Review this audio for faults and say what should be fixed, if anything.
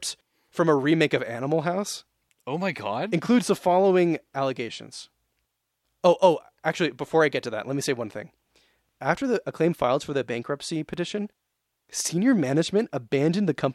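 A block of digital silence occurs at 10.94 s, right after "filed for the bankruptcy". For about 2.9 ms the signal drops straight to silence and returns with no fade, and at this length it is heard as a tick or dip rather than a gap. The length fits one 128-sample buffer.

To prevent it, give the audio thread enough buffer headroom to meet every deadline, and check processing output for invalid values before it reaches the output.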